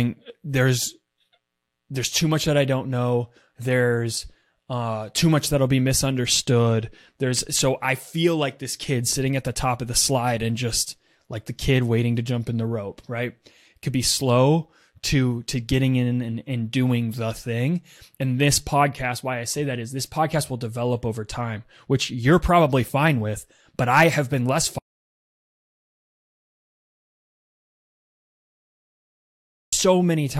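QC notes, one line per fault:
24.79–29.73 s, audio dropout to silence: just after "I have been less" the speech cuts off mid-flow and the track falls to complete silence for about 4.94 s, with no room tone or noise floor underneath, before sound resumes at 29.73 s. Writing silence like this means the input signal likely vanished upstream, through a lost connection or an unintended mute, while recording carried on, so whatever was spoken across that stretch is gone.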